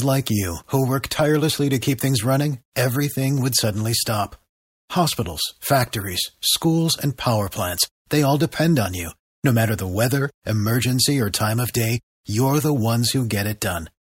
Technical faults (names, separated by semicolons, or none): none